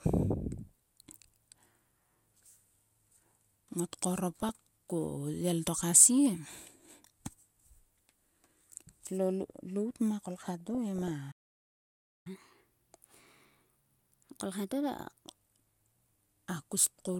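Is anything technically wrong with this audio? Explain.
Yes. The speech has three distinct faults.

DAB burbling appears at 0.58–0.69 s, 2.46–2.50 s, 4.41–4.49 s, 10.60–11.11 s and 17.06–17.15 s. Residual bit errors corrupt MP2 samples and scale factors, which produces short noise blips and level jumps in single sub-bands rather than the flat broadband crackle of digital clipping.

A playback stall runs from 11.31 to 12.27 s. The audio simply goes silent for about 0.94 s, likely because the player's buffer ran dry.

Catch-up at higher speed follows from 12.27 to 15.27 s. The backlog plays at 1.15× by resampling, so the speech is faster and roughly two semitones higher, then drops back to normal. Speed and pitch rise together, unlike a pitch-preserving time stretch.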